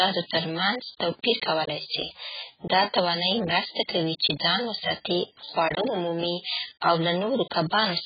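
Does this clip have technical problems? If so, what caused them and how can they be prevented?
Yes: AAC compression throughout, likely at a very low bitrate (near 12 kbps): nothing above 4.8 kHz, with warbling, smeared sibilants, and a fizzy texture unlike a clean low-pass. Encode at a higher bitrate.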